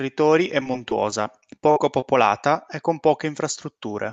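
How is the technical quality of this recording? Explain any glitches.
The speech is marred by one choppy stretch. Repeated packet loss (robotic sound) runs from 0.60 to 2.03 s: eleven short gaps, the longest 47 ms, are each filled by stretching the preceding sound. This leaves the speech choppy with pieces missing, with about 11% of that span concealed. The call codec limits the high end to 8 kHz.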